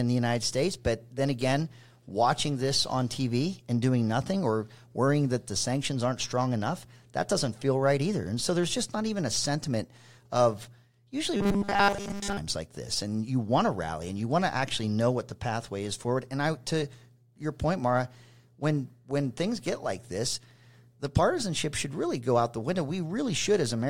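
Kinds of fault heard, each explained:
Robotic sound from repeated short buffers: a rigid, metallic 200 Hz buzz before "like this and you", likely from a 5 ms block replayed in place of skipped audio; the spectrogram shows flat, evenly spaced harmonic stripes.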